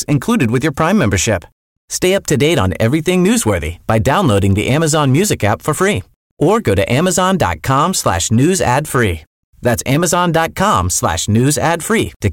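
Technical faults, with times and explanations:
Throughout, hard clipping: the speech is driven about 5 dB beyond what a stage in the chain can pass, so the loudest peaks, a small share of the samples, are cut flat. Those flat tops add high harmonics, heard as crackle riding on loud syllables. Unlike isolated clicks, this crackle tracks loudness.
4.38 s and 5.24 s, dropped samples: two lone, sharp clicks, the second just before "app for free or". Each is likely a gap of well under a millisecond where the waveform jumps ahead, too short to remove any sound. Unlike the clipping crackle, these clicks stand alone and do not follow loudness.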